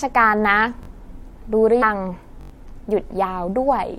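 At 0.83 s the speech catches on a repeated buffer. The output device ran dry and replayed its last block twice more, so the same 21 ms piece sounds three times in a row with a hard seam at each join, running to 0.88 s. That buffer length fits a 1024-sample buffer. It comes across as a quick stutter, with roughly 40 ms of real audio lost.

At 1.81 s there's a case of compressed frames skipped. The decoder never played a short run of frames, either because they were missing or because it rejected them as damaged, so the speech jumps forward by about four 23.2 ms frames, around a tenth of a second.

The repeated buffer returns at 2.41 s, longer this time. The same 21 ms block plays four extra times through 2.50 s, giving a longer stutter and losing around 100 ms of speech.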